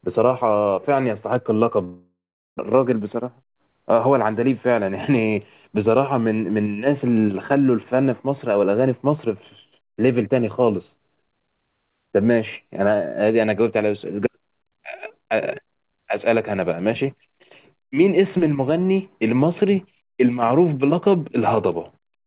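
From 1.84 to 2.61 s a long network dropout is the likely cause of the gap. The last sound is stretched into a fading buzz or hiss, then about 400 ms of silence, and about 600 ms of speech is simply gone rather than delayed, unlike a brief packet-loss glitch.

From 2.72 to 3.94 s a jitter buffer speed-up follows, as the receiver works off the delay that built up during the outage, roughly 150 ms. It trims about a tenth of a second in short pitch-period cuts, so speech runs at about 109% speed yet keeps its pitch, which separates it from a sample-rate error. All of this is heard through narrowband telephone-style audio with nothing above 4 kHz, which fits a G.711 call path.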